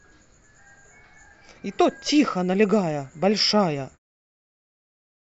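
No technical faults are audible.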